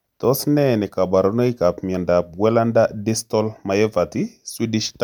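Nothing technically wrong turns up anywhere in this short bit of speech, so there are no faults to point to and no times to give.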